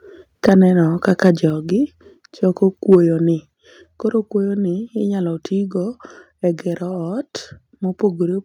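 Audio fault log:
0.48–0.50 s, microphone overload: a sharp crackle on a loud peak, likely from input level about 5 dB beyond the converter's limit, flattening roughly a tenth of samples.
0.49 s, microphone volume stepped down: speech and background drop suddenly by about 3 dB, likely the call software cutting input volume in one step after that peak.
1.08–1.30 s, microphone overload: a milder harsh edge across loud syllables, likely peaks driven about 2 dB past the converter's limit, so only a small share of samples are cut.
1.50 s, microphone volume stepped down: an abrupt drop of about 4 dB in the whole signal, likely the software lowering the device's input gain again after the distortion.
2.92–2.95 s, microphone overload: a brief but gritty crackle, likely peaks pushed about 3 dB over the limit, with roughly a fifth of samples clipped flat.
3.54 s, microphone volume stepped down: the level falls suddenly by about 5 dB, likely a further single-step gain cut by the software reacting to the clipping.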